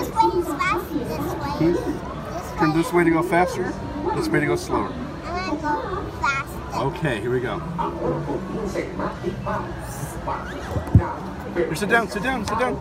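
No technical faults can be heard anywhere in this audio. Nothing disturbs the sound at any point.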